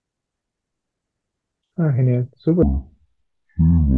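From 2.63 s to the end of the clip the speech drops into a wrong sample rate fault. The samples are clocked out at half the speed they were captured, with no conversion, so tempo and pitch fall together: playback runs at 0.5x and the voice sits a full 12 semitones, one octave, lower, sounding slow, heavy and dragged. A halving like this fits 44.1 kHz audio played at roughly 22 kHz.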